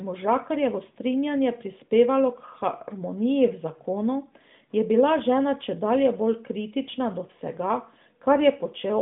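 No technical faults can be heard in this speech, which comes over an AMR narrowband mobile line with nothing above 3.7 kHz.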